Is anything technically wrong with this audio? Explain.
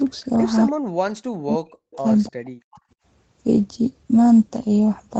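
Yes. From 0.85 to 2.04 s and again from 2.28 to 2.85 s, the speech dips by up to roughly 40 dB. This is speech suppressed in double talk, likely caused by an echo canceller muting its own talker while the far side speaks. Unlike packet-loss dropouts, these gaps come as gated dips rather than clean instant holes.

Echo leak is audible at 1.91 to 1.96 s and 2.25 to 2.29 s. Faint delayed copies of the voice arrive 291 ms late, at about 25 and 30 dB below the speech. These are likely residual loudspeaker echo that the far-end canceller missed. Unlike room reverberation, these are discrete scraps at a fixed lag, not a smooth decaying tail.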